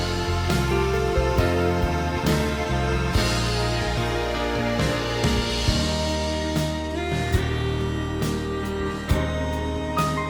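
At about 3.97 s the audio skips ahead. Roughly a second of material is missing, and the two sides are butted together with no silence in between. That seamless jump, rather than a gap or a fill, separates it from an ordinary dropout.

From 6.71 to 6.91 s a jitter buffer speed-up runs the audio at about 147% of normal speed, trimming around a tenth of a second. The pitch stays the same, which distinguishes it from resampling, where speeding up would also raise the pitch.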